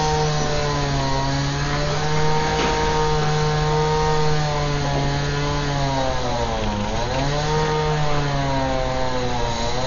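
Dolby Digital compression, likely the cause of the heavy damage heard across the whole of this everyday-sound recording, leaves nothing above 7 kHz, so the audio is dull and boxed-in. Around tonal parts there is a rough, fluttering noise where the decoder has filled empty frequency lines with dither rather than real detail. A narrowed band and starved mantissas to this degree fit a bitrate as low as 48 kbps.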